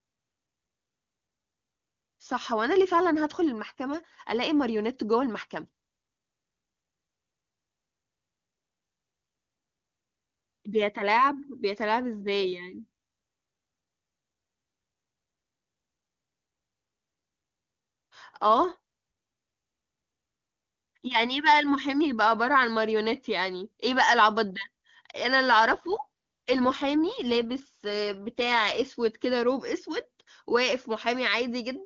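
From 25.70 to 28.88 s, an AMR rate drop turns speech rough and synthetic, fitting 8.85 kbit/s. The spectrogram keeps its full band, with no gap.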